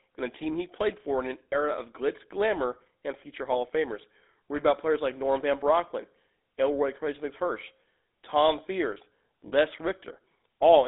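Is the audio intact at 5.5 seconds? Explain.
No. At 5.5 s, as throughout the clip, the speech carries GSM full-rate codec damage. Coarse, regularly pulsed excitation gives it a buzzy, gravelly roughness, consistent with a 13 kbps codec. A spectrogram shows the band held between 250 Hz and 3.7 kHz, empty above.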